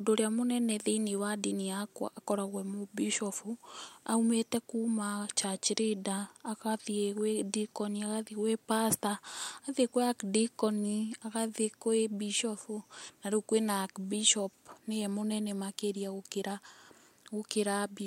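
No audible technical faults in the speech recording: level, continuity and timing hold steady throughout.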